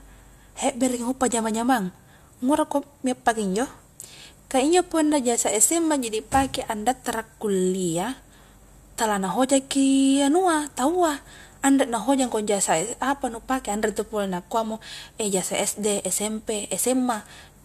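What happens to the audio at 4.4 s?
Nothing goes wrong at 4.4 s; the speech runs on without a dropout, click or other fault at that point.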